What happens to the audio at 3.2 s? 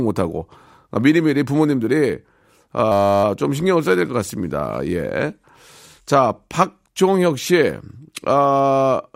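At 3.2 s the clip is in the last moments of a system hang loop. It runs from 2.92 to 3.24 s. The computer or audio driver stalled while the sound hardware kept replaying the same small ring buffer. A 10 ms slice of speech repeats exactly, 32 times. At 100 repeats per second, this is heard as a steady, flat buzz rather than a stutter. Playback then resumes with essentially nothing missing.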